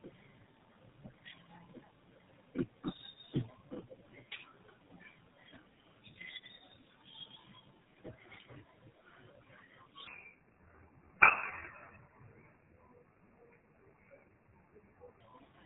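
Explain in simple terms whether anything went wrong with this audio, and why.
Two things went wrong here. The first runs through the whole clip: tandem speech coding. On its way through, the speech was squeezed by a phone speech codec, unpacked, and squeezed again three times in a row. It went from a GSM mobile codec to iLBC and back to GSM. Each pass works on the already damaged result of the one before, so the roughness builds up. The speech sounds gritty, muffled and warbly.

The second is a section at the wrong speed, from about 10.07 s to 15.20 s. In that stretch the audio plays at roughly 0.73 times its proper speed, so everything drags and the pitch drops by about five semitones, sounding deep and slow. Speed and pitch sink together, which is what you get when playback runs at the wrong rate. The likely cause is that part being played or edited against the wrong clock.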